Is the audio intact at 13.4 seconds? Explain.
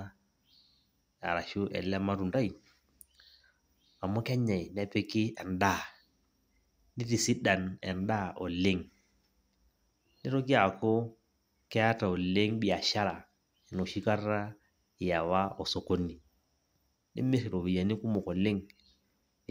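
Yes, at 13.4 seconds the speech is intact, with no dropout, glitch or other fault audible there.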